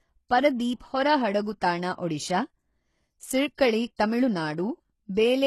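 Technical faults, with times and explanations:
Throughout, HE-AAC compression: the sound is plainly degraded, with nothing above 12.3 kHz, and the treble has a synthetic, metallic sheen. This is likely HE-AAC at a very low rate, fitting something near 16 kbps. Only the lower band is truly coded, and the upper band is rebuilt by copying lower content upward under a coarse envelope. Its harmonics fail to line up with those below, so sibilants turn gritty and lispy.
3.55 to 3.58 s and 3.96 to 3.99 s, pre-echo: just before each of these two sharp onsets, a short hiss of about 26 ms leaks in, and the attack itself sounds blunted. The codec's quantisation noise is spread evenly across each transform block. When a sudden attack lands late in a block, noise sized for the loud part fills the quiet gap ahead of it, smearing the onset backward in time.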